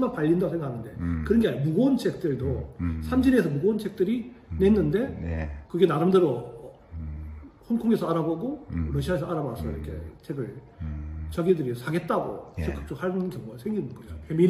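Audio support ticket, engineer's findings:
No audible faults found; no issue to report.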